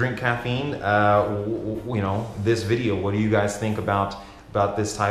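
No technical faults can be heard anywhere in the audio. Nothing in the sound needs a timestamp or any further comment.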